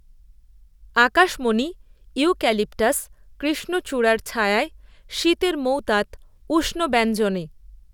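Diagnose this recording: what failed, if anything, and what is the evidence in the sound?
Nothing failed here; the speech comes through with no audible fault at any stage of the chain.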